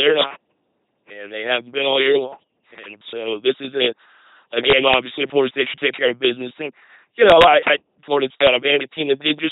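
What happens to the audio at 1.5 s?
At 1.5 s the speech is running through the same LPC-10 vocoder that colours the whole clip, from start to finish. The coder reduces each short stretch to a small all-pole filter model, fed by either a buzzy pulse train or plain noise, with nothing in between. That gives the heavy, mechanical robot quality you hear, which fits a 2.4 kbit/s LPC-10 coder. There's also no content above about 3.9 kHz, so it sounds dull and boxy.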